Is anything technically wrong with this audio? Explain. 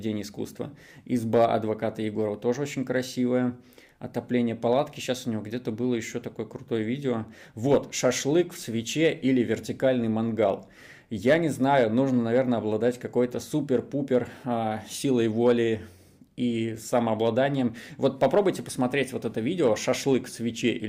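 No, no technical faults detected.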